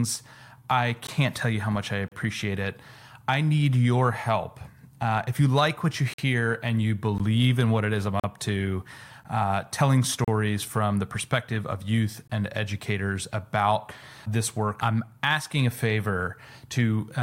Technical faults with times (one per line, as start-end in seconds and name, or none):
1.07 gap between stream segments
2.08-2.12 gap between stream segments
6.14-6.19 gap between stream segments
7.18 gap between stream segments
8.20-8.24 gap between stream segments
9.24 gap between stream segments
10.24-10.28 gap between stream segments
12.28 gap between stream segments